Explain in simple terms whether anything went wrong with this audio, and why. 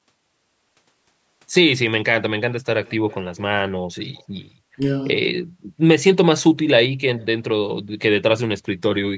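Echo leak appears at 2.85 to 3.15 s, 3.36 to 3.41 s, 4.15 to 4.24 s and 7.16 to 7.26 s as a faint, delayed copy of the speech trailing about 225 ms behind it. The likely cause is that the other person on the call was using a loudspeaker, and their microphone picked the sound back up. Their echo canceller didn't remove all of it, so these quiet scraps were sent back down the line.

Speech suppressed in double talk shows up at 4.76 to 4.80 s, where the speech briefly drops away for about 40 ms. The likely cause is that both sides were talking at once. The echo canceller couldn't tell the real talker apart from the loudspeaker echo, so it turned everything down for that instant, leaving a short dip.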